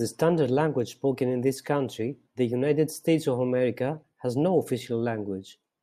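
No technical fault can be heard anywhere in the recording. Nothing on any stretch of the speech calls for comment.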